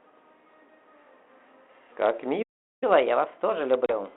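Telephone-band speech, limited to roughly 250 Hz to 3.4 kHz with the light grain of 32 kbit/s G.726 ADPCM, cuts out completely at 2.42 s in a playback stall and stays silent until 2.84 s, about 0.4 s. The output most likely starved for data or had its thread blocked. From 2.84 s to the end the player catches up at higher speed, running 1.15 times fast, so pitch rises by about two semitones throughout. This is a resampling speed-up, not a pitch-shifting fault, because tempo and pitch climb together. At 3.86 to 3.93 s, packet loss on the ADPCM call leaves a hard-edged hole with about 30 ms missing, probably a few packets. The speech then returns slightly distorted as the decoder's predictor regains step. That lingering settling distinguishes it from a clean gap.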